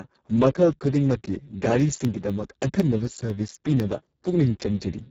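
Speex codec, across the whole recording: this speech has been squeezed to a bitrate near 6 kbps, leaving the CELP excitation starved, so the voice sounds hoarse, noisy and edging toward robotic, with the upper band only a hissy fill and nothing above 7.6 kHz.

Periodic USB or driver dropouts, from 1.80 to 4.05 s: every 0.25 s a tiny slice of audio, well under a millisecond, is replaced by silence as a stalled transfer interrupts the stream, giving about ten evenly spaced ticks that sound only over the speech.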